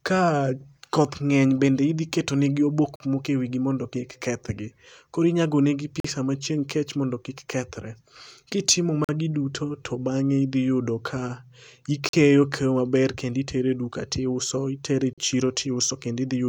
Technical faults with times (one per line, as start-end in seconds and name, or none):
2.96-3.00 gap between chunks
6.00-6.04 gap between chunks
9.04-9.09 gap between chunks
12.09-12.13 gap between chunks
15.13-15.18 gap between chunks